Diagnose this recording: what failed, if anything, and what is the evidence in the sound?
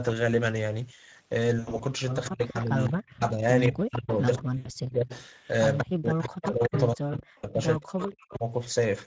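Speex codec damage runs through the whole thing. The audio is hoarse and noisy throughout, which fits a CELP coder like Speex at around 16.8 kbps that's starving the excitation of bits. The band stops at 8 kHz.

VoIP packet loss concealed by the speech codec shows up three times: 1.59–1.84 s (about 120 ms lost in scattered gaps, longest 80 ms), 4.57–4.70 s (80 ms) and 7.37–7.45 s (60 ms). In each, the decoder extrapolates from the last pitch and filter with fading gain, and it takes a moment to recover.

Speech suppressed in double talk hits 2.29–5.1 s and 5.81–8.44 s. The talker dips and chops in pieces, with the deepest drops roughly 40 dB. That's likely the echo canceller clamping down because the far side was talking at the same time.

Echo leak puts a delayed copy of the voice about 196 ms behind, roughly 10 to 25 dB down. It appears at 2.43–3.1, 3.64–3.68, 4.08–4.42, 5.13–5.79, 6.27–6.8 and 7.99–8.38 s. 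It's likely a loudspeaker-side canceller letting residue through.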